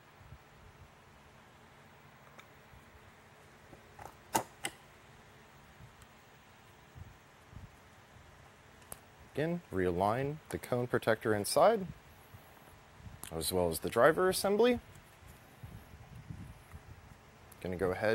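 Nothing in this audio catches the ear as a technical fault; it just runs along without a hitch.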